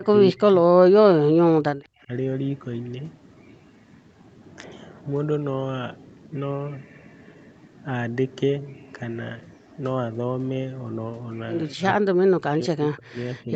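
Speech dips hard, by roughly 25 to 30 dB, at 0 to 0.13, 0.31 to 0.72, 1.25 to 2.1 and 11.74 to 13.53 s. That's likely speech suppressed in double talk, with the echo canceller ducking the local talker along with the loudspeaker echo.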